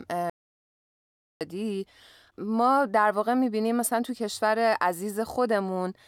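An audio dropout to silence runs from 0.30 s to 1.41 s, taking out about 1.11 s of the speech. The speech breaks off abruptly just after the clip begins and resumes mid-flow, and the gap between is dead silence with no room tone or hiss. The input was likely cut off by a momentary disconnection or mute while recording carried on writing silence, so anything said in that stretch is lost.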